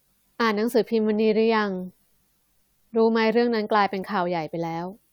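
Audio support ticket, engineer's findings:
Engineer's findings: no fault found in the speech audio on this ticket.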